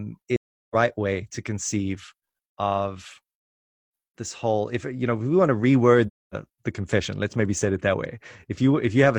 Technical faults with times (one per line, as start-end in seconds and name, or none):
0.35-0.75 AAC frame loss with muting
6.07-6.34 AAC frame loss with muting